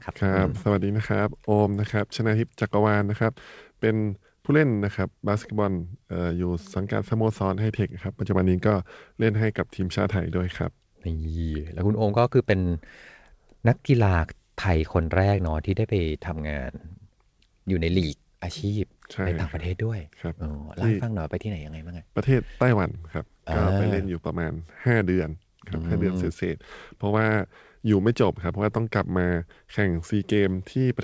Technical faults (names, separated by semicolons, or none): none